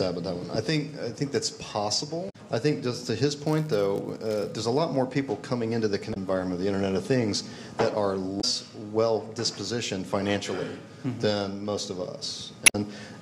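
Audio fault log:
2.26–2.36 s, 6.10–6.17 s, 8.37–8.44 s and 12.63–12.75 s: damaged data in a compressed stream. Each of these four short bursts, lasting roughly 70 to 120 ms, is a brief chirp, squawk, click or short hole. The compressed data at these points was corrupted, so the decoder misreads those frames, loses its place in the stream and hunts for the next valid frame header.
3.47–4.54 s: filter restarted on every block. For about a second, a 100 Hz buzz sits on the audio. A filter in the chain is losing its state between processing blocks and starting each block from silence. Every restart adds a tiny transient at the block boundary. These repeat at the block rate and fuse into a buzz whose loudness tracks the level of the audio passing through.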